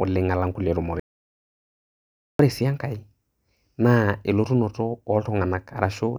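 From 1.00 to 2.39 s the speech drops out to dead silence, with no room tone. This audio dropout to silence likely came from lost input.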